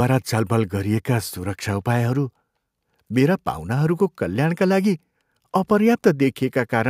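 No technical faults are audible.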